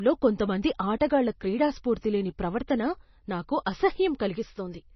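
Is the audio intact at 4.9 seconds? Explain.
No. At 4.9 seconds the speech carries heavy MP3 compression damage, present throughout the clip. Nothing is heard above 5.9 kHz, and the watery, swirling texture fits a starved encoder, likely near 24 kbps, cutting the treble and switching weak frequency lines on and off between frames.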